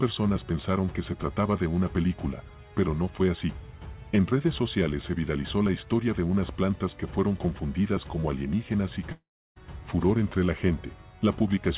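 A long network dropout starts at 9.12 s and runs to about 9.58 s. The last sound before the break is drawn out as a fading buzz, and the gap settles into roughly a third of a second of silence before the audio resumes. Close to half a second of material never returns. The likely cause is that packets stopped arriving and the receiver concealed the hole. The whole clip stops at 4 kHz, which fits a G.711 mu-law call path.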